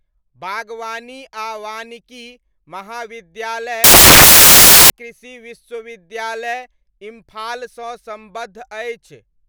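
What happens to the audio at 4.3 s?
At 4.3 s the speech is buried under loud, harsh broadband noise: samples built from the wrong bytes, from 3.84 to 4.9 s, with misassembled bytes pushing the rapidly changing low bits into the large part of each value.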